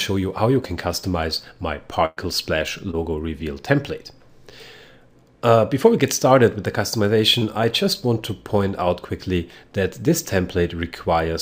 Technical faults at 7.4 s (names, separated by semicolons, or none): short concealed packet loss